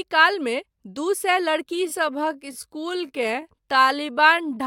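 Right after "दू सए", from about 1.67 s to the end, there's a time-stretched section: the speech suddenly drops to roughly two-thirds pace while the pitch holds steady, sounding dragged, likely from software repeating short slices to lengthen the audio.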